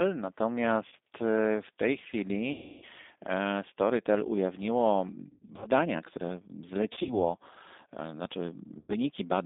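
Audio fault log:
Throughout, G.729 codec: the speech was squeezed through a low-rate codec whose character points to G.729A at 8 kbit/s. It is rebuilt from a vocal tract filter and sparse pulses within a band of roughly 250 Hz to 3.7 kHz, so it sounds plainly rough, thin and synthetic.
0.88–0.94 s, 2.52–2.85 s, 5.30–5.67 s, 6.93–7.15 s and 8.79–8.95 s, VoIP packet loss concealed by the speech codec: packets went missing, about 40 ms, 300 ms, 160 ms scattered over 320 ms, 100 ms scattered over 160 ms, and 100 ms. The decoder stretched its last pitch and filter with falling gain, leaving a fading buzzy tone or coloured noise and weak speech afterwards.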